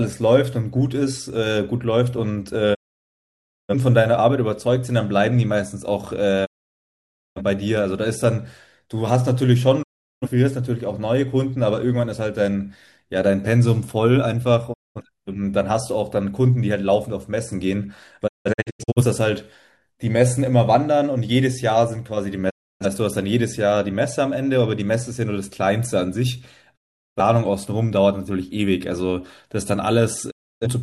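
The receiver repeatedly lost valid frames and muted, a digital broadcast dropout. The speech fades out within 20 ms and returns later with content missing, at 2.73, 6.44, 9.82, 14.72, 18.26, 22.49, 26.75 and 30.30 s, for 0.2 to 0.94 s. At 18.26 s, several short holes scatter across 0.68 s.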